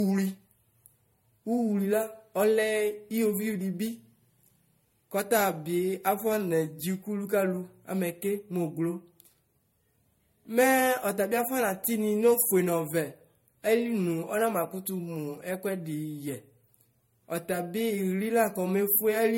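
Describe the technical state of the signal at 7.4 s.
At 7.4 s the speech carries generation loss, as it does through the whole clip. It sounds swirly and hollow, with smeared consonant attacks and nothing above about 16.6 kHz, likely from several passes of MP3 re-encoding at around 64 kbit/s, each piling up fresh quantisation noise.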